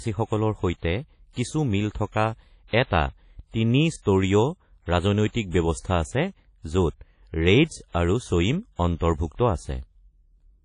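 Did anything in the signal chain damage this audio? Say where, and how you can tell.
Yes. The damage happened at the codec stage: the speech was likely squeezed through an early WMA compression encoder at a low bitrate, around 32 kbps. The transform coding is plainly audible throughout. Nothing survives above about 10.1 kHz, so the top end is missing, and the remaining sound rings and washes with a hiss that swells and fades with the speech. Those are the marks of coarse quantisation in long transform blocks.

The same codec also caused pre-echo at 1.33 to 1.37 s, just before "কিছু মিল থকা". A short hiss arrives about 38 ms ahead of the attack, and the onset itself sounds softened and smeared. This happens when a sharp transient lands late in a transform block. The quantisation noise, sized for the loud part, is spread evenly across the whole block, so it fills the quiet moment before the attack.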